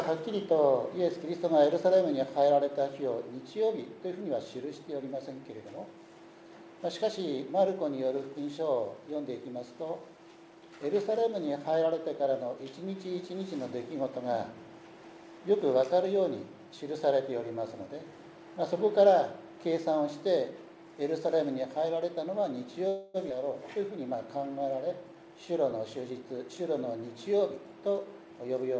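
From 22.88 to 23.17 s the sound hangs on its last moment as a fading buzz for about 0.26 s, then resumes where it left off with nothing lost. This is a call audio freeze, likely from delayed packets leaving the jitter buffer empty.

At 23.29 to 23.33 s the audio jumps abruptly forward, with the two sides butted almost directly together. This skip ahead drops around 150 ms of material.

From 25.02 to 26.51 s the audio runs about 8% fast at unchanged pitch, sounding hurried. This jitter buffer speed-up trims short pitch-period slices, roughly 100 ms in total, to shrink the buffer back to its target. Throughout, the G.722 call path leaves nothing above 8 kHz.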